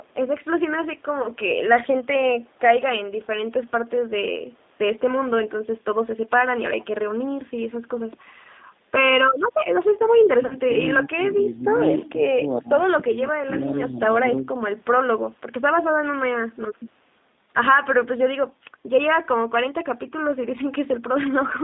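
G.729 codec damage runs through the whole clip. The speech is squeezed into a line band of roughly 200 Hz to 3.7 kHz, and at 8 kbit/s each 10 ms frame is rebuilt from a vocal tract filter, a pitch predictor and a handful of pulses. The result is a plainly audible rough, slightly synthetic texture, with no air or sibilant detail above the band.

VoIP packet loss concealed by the speech codec first occurs at 1.22 to 1.27 s. About 20 ms of audio is missing, which points to a single lost packet. The decoder stretches its last pitch and filter settings across the gap and lowers the gain, so a short buzzy or noisy, smeared patch is heard. Because each frame builds on the one before, the damage lingers briefly after real audio returns.

Speech suppressed in double talk starts at 10.21 to 10.86 s, where the level dips by as much as about 25 dB. Inside that stretch, at 10.46 to 10.56 s, a second packet-loss concealment covers about 40 ms, consistent with two consecutive packets. 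That adds a buzzy or noisy, fading smear on top of the dip.

Further double-talk suppression follows at 11.1 to 11.8 s (about 20 dB deep), 12.61 to 12.87 s (about 15 dB) and 13.07 to 14.0 s (about 10 dB). The sound ducks, thins or breaks into pieces in each of these spans. This is likely an echo canceller turning down the near talker while it cannot tell that voice apart from far-end echo.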